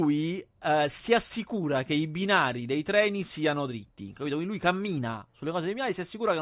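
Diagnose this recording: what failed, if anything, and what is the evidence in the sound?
Nothing failed; no stage from capture through playback leaves an audible fault anywhere in the speech.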